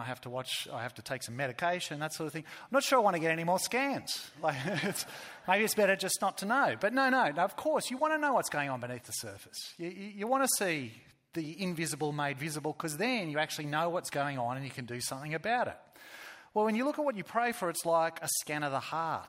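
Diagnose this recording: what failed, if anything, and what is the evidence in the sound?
Nothing failed; no stage shows any audible fault.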